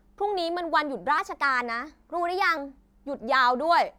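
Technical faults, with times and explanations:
1.18 to 2.57 s, section at the wrong speed: this stretch was likely played back against the wrong clock, running 1.12 times too fast, so the speech abruptly becomes hurried and rises by about two semitones, then snaps back to its normal pitch and pace.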